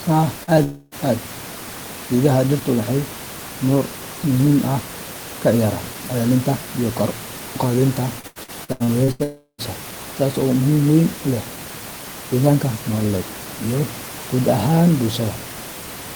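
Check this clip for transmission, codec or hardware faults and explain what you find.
Packet loss shows up in three forms across the clip, against room noise about 14 dB below the speech.

A short concealed packet loss occurs at 0.43 to 0.50 s. About 40 ms of audio arrived too late for the decoder. The receiver extended the preceding sound to cover the hole, then blended back in. It is heard as a brief smear in the speech.

A long network dropout is the likely cause of two longer breaks. From 0.63 to 0.95 s, about 280 ms is missing. The last sound is stretched into a fading buzz or hiss, and no silence is left before speech returns. From 9.23 to 9.61 s, about 360 ms is lost. The fill fades and ends in roughly 100 ms of silence. Speech resumes with that part gone.

Repeated packet loss (robotic sound) runs from 8.19 to 9.22 s, just after "iyo kor u qaadida". Eight separate gaps occur, the longest 82 ms. 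Each gap is patched by continuing the previous sound, and together the patches cover 43% of the stretch. The speech turns choppy, with pieces missing.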